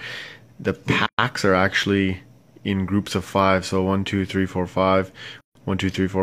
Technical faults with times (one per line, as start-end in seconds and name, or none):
1.06-1.19 gap at a join of encoded pieces
5.41-5.55 gap at a join of encoded pieces